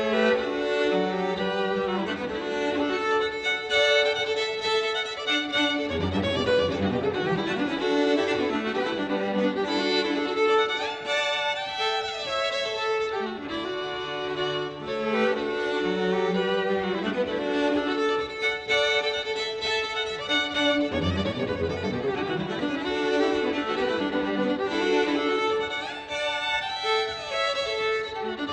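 Nothing in the audio stands out as a technical problem; there are no dropouts, glitches or other faults to point to at any moment.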